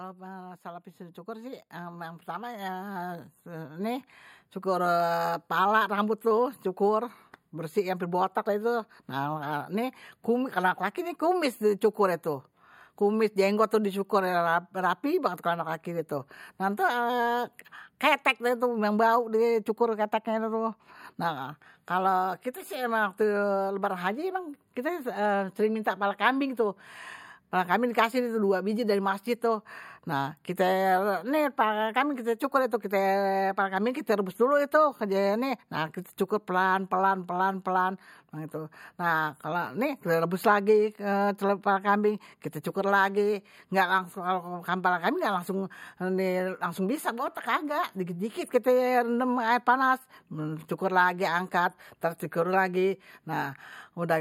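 A speech recording with automatic gain rising from 0.62 s to 25.18 s. The gain control judged the input too quiet and slowly raised it, by about 16 dB. Voice and background swell together until it settles, just before "sering minta kepala kambing".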